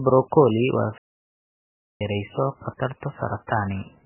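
From the start, the speech carries heavy MP3 compression artefacts. The sound is watery and swirly, with smeared attacks. The likely cause is MP3 encoding starved of bits, which fits a very low bitrate such as 8 kbps.

At 0.98 s the audio stops dead mid-flow. Silence lasts about 1.03 s, until 2.01 s, when the sound resumes. This is a playback stall. The player likely ran out of data or was blocked, and output went silent until it recovered.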